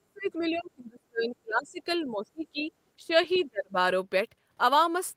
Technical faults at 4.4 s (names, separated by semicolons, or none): none